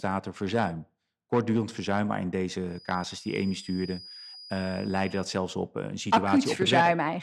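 From 2.64 s to 5.35 s, between "verzuim maar in" and "op een", a feedback whistle sits behind the speech: a thin, steady tone at 4.9 kHz, roughly 20 dB below the voice, swelling and fading slowly in level. The likely cause is a loudspeaker-to-microphone loop held just at the edge of instability, so one frequency rings on without building up. On a spectrogram it shows as a narrow horizontal line at 4.9 kHz; on the waveform it barely registers, except as a faint fill in the pauses.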